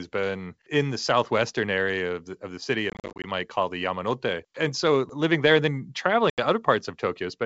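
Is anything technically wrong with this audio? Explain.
Yes, there's packet loss on an ADPCM call, around 2.90 to 3.25 s (about 190 ms gone in short bursts, none longer than 40 ms) and at 6.30 to 6.40 s (80 ms). Dropouts get filled with silence, the G.722 decoder's predictor and step size drift from the sender's, and the speech comes back slightly distorted before settling.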